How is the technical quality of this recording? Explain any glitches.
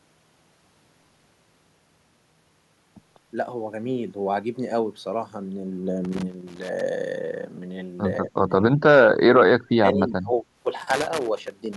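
The recording has two recurring problems: bursts of connector crackle and two stretches where the speech is pushed down.

Loose connector crackle occurs from 6.04 to 6.81 s and again from 10.77 to 11.76 s. A worn or dirty contact in the signal path is opening and closing as it shifts, chopping the audio. It sounds like irregular scratching laid over the speech. On a waveform, it appears as jagged, uneven spikes and brief dropouts. On a spectrogram, it shows as scattered vertical broadband streaks.

Speech suppressed in double talk affects 8.23 to 8.51 s and 8.77 to 10.45 s. The speech dips, falling by about 20 dB in the first stretch and by about 35 dB at worst in the second. About 1.2 seconds in total is affected. This is likely an echo canceller that couldn't separate the talker from far-end echo while both sides spoke, so it attenuated everything. The waveform shows sudden gaps and shrunken sections. 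The spectrogram shows the speech energy fading in patches.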